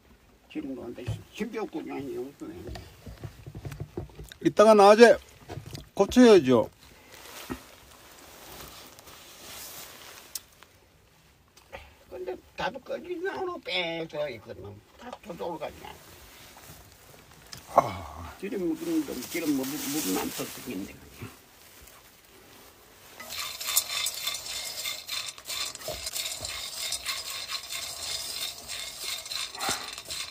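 At 14.00 s, 19.63 s and 26.10 s, compressed frames are skipped: the decoder drops whole frames, either missing from the stream or rejected as corrupt, and playback jumps forward. The first gap loses about a fifth of a second, the later two about a tenth each, consistent with runs of 32 ms frames. At each join the audio lurches ahead.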